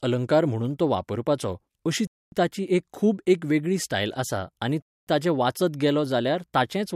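At 2.07 to 2.32 s, after "म्हणून तो वापरपाचो अशी", and again at 4.82 to 5.07 s, after "वेगळी स्टायल आसा आनी", the speech stops for 250 ms. This is a gap between chunks: silence inserted at 2.5 s boundaries, so the speech resumes intact but interrupted.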